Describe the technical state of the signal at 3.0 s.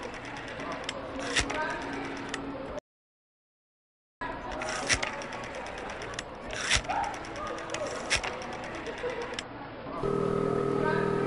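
An audio dropout to silence covers 3.0 s, running from 2.79 s to 4.21 s, so about 1.42 s of the sound is missing. The input was likely lost at the source, through a disconnected device, a broken link or an accidental mute, while recording carried on writing silence. The sound stops abruptly mid-flow, leaves pure silence with no background ambience, and then resumes just as suddenly.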